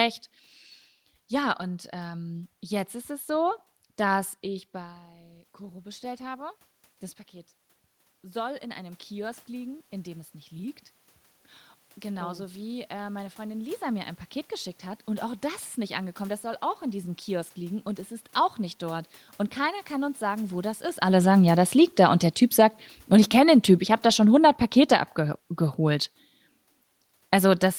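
At 21.05 s, just after "sagen wo das ist", and close to where the talker also shifts position around 21 s, an automatic gain falling fault begins and runs to the end of the speech. The gain control judged the input too loud or its background noise too strong and kept pulling its gain down, so the voice and the room noise behind it sink together. On a waveform the envelope tapers steadily; on a spectrogram the whole picture, noise floor included, fades evenly.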